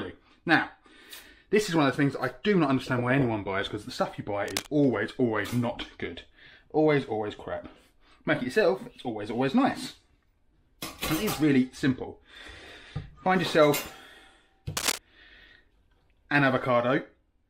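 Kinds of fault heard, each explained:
Cable scratch noise: at 4.46 s and 14.77 s, brief rustling bursts, the second as loud as the sound, likely a worn contact's resistance fluctuating.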